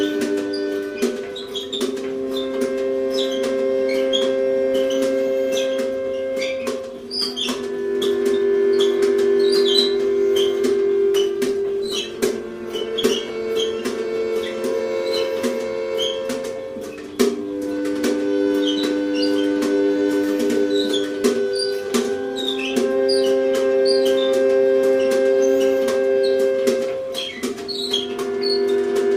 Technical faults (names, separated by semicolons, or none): call bitrate drop